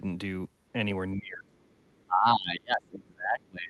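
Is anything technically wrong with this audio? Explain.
Yes. From 1.16 s to the end of the clip, the speech sinks sharply, by around 25 dB at its deepest, thinning and breaking up in pieces. This is likely speech suppressed in double talk: the echo canceller could not separate the talker from the overlapping loudspeaker echo and attenuated both. The top end stops near 12 kHz, as set by the call's Opus codec.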